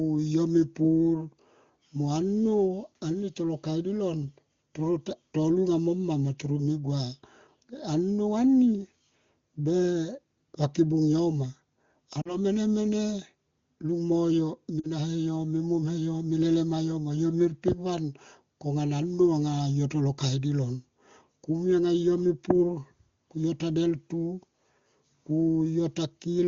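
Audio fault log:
12.22 to 12.37 s and 14.79 to 14.87 s, lost AMR speech frames. Radio errors corrupted about 40 ms of coded speech each time, which fits two 20 ms frames. The decoder reused its last good pitch and vocal tract settings at falling gain. The speech briefly smears and dips, then recovers.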